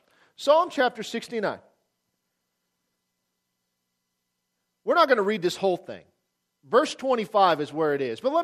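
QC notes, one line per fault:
5.19–5.23 s and 6.87–6.92 s, DAB burbling: two brief bursts, each about 50 ms, which fits two or three damaged frames. Weak reception lets a small share of bit errors (a fraction of a percent) slip past error correction, so individual sub-bands get short blips of noise.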